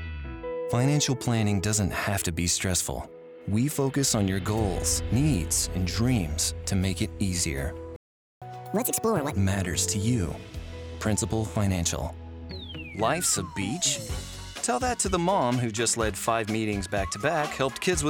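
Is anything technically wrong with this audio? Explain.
Yes. There are two linked faults.

From 7.96 to 8.42 s there is a playback stall. The output falls silent for about 0.45 s, likely because the player ran out of buffered data or its thread was blocked. Unlike a dropout, nothing is lost. The sound resumes exactly where it stopped.

From 8.42 to 9.33 s comes catch-up at higher speed. The player resamples its backlog at 1.5 times normal speed, so tempo and pitch rise together, by about seven semitones, then snap back. A pure pitch shift would leave the timing unchanged.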